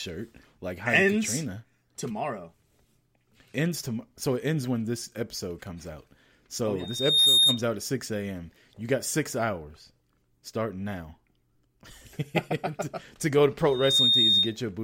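A microphone is picking up the loudspeaker it feeds, and at 3.7 kHz the loop gain climbs past one, producing loudspeaker feedback squeal. From 6.79 to 7.63 s, just before "out at", a pure 3.7 kHz tone swells over less than half a second to about 10 dB above the speech, then drops away. It returns from 13.67 to 14.57 s, right after "to go to", rising a little faster to the same piercing level.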